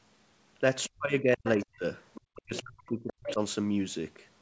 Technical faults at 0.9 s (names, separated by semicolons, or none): other side's voice leaking through; speech suppressed in double talk